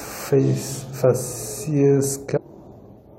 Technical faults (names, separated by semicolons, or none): stream segment skipped